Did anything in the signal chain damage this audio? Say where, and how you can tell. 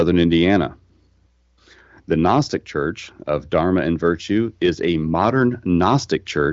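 No, nothing damaged this audio.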